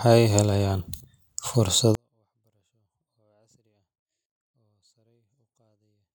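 At 1.95 s a 24-bit alignment error (too quiet) sets in: samples held in the low 24 bits are read as full 32-bit values, so the speech drops about 48 dB, clean but nearly inaudible. The waveform flattens to a line, and the spectrogram goes near-black.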